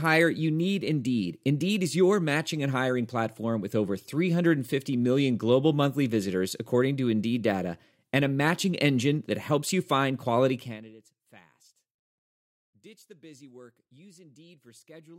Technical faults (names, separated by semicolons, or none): zipper noise